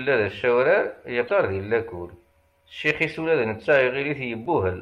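A short speech clip with two brief blips of damaged data in a compressed stream, at 1.27 to 1.31 s and 4.43 to 4.47 s. Corrupted bytes there made the decoder misread frames and lose sync at each spot.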